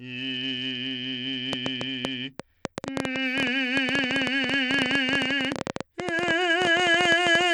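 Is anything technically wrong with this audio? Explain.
Yes, there are two faults. Throughout the music, the treble flickers and drops out under a gritty haze. This is likely Bluetooth SBC compression, starving the top sub-bands, which fits a low bitrate near 96 kbps. From 1.53 s to 7.42 s, a train of clicks ticks over the music. There are around seventy uneven pops, near 12 per second, peaking roughly 20 dB above the music. Interference or a faulty connection is the likely source.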